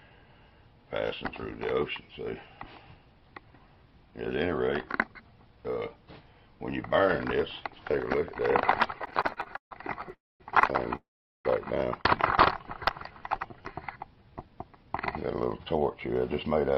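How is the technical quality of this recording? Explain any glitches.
The recording's technical quality is poor in its second half, with a run of network-timing glitches from about 9 s to the end.

Repeated stalls (stutter), 8.99 to 10.15 s: the receiver ran out of audio 19 times and stretched the last sound to cover each gap, the longest 143 ms, about a third of that span in all. Nothing is lost, but the audio drags and catches in quick, choppy hitches, unlike a single freeze.

Call audio freeze, 10.15 to 10.42 s and 10.96 to 11.47 s: the audio stops for 252 ms and then 488 ms, a brief fading buzz or hiss giving way to silence for roughly 220 ms and 400 ms. The likely cause is packets held up in transit emptying the jitter buffer. The audio then resumes where it stopped, adding a gap rather than cutting anything, which sets these apart from the shorter, repeated stutter hitches.

Jitter buffer slow-down, 12.57 to 14.60 s: the receiver rebuilt its reserve by repeating single pitch periods or bits of pauses, adding 249 ms. 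The sound runs at 88% speed with unchanged pitch, so it is drawn out rather than lower, as a tape slowing would be.

Jitter buffer speed-up, 16.32 to 16.73 s: the buffer held excess audio, so the receiver trimmed short pitch-period pieces, about 70 ms in total. The audio plays at 114% speed, hurried but at the same pitch, the mirror image of the earlier slow-down.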